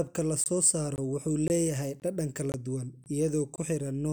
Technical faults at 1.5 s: gap between chunks

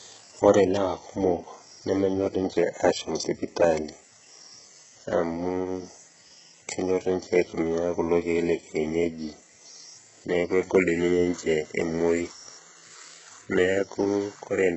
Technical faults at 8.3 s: HE-AAC compression

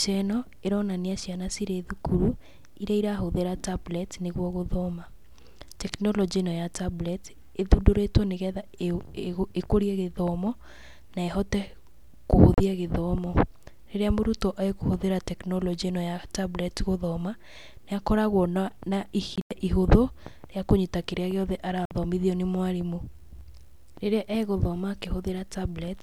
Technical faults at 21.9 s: Bluetooth dropout

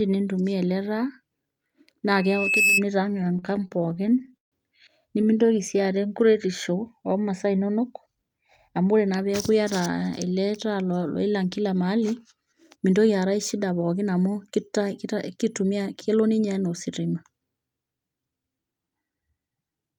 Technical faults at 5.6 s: jitter buffer slow-down

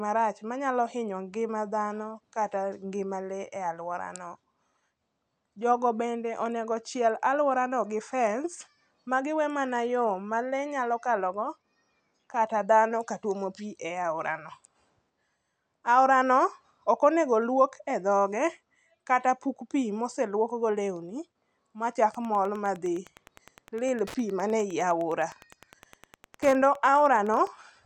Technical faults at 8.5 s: none

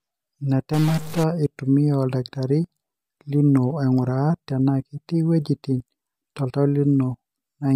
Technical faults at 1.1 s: stuck bit

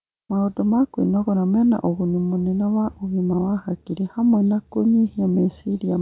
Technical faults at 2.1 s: none

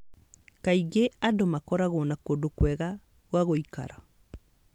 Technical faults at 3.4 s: none

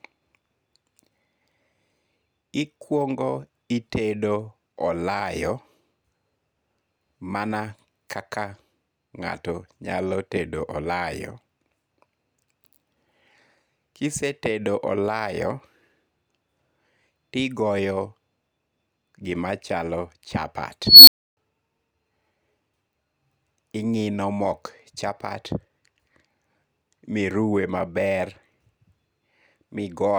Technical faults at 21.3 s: unstable filter

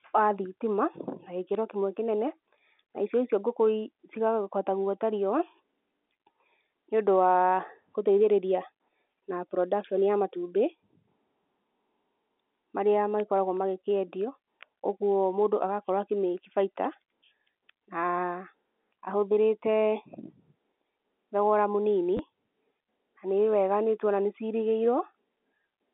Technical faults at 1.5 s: packet loss with last packet repeated

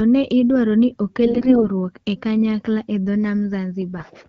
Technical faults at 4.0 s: AMR bit errors

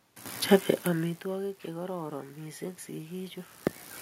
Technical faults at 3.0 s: automatic gain rising

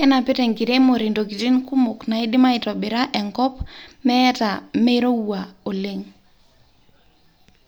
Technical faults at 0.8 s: none

